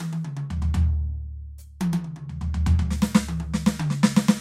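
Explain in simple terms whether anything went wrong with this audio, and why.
From 3.15 s to the end, channel delay (comb filtering) dulls the music: one side lags about one sample, cancelling only the highest treble rather than muffling everything.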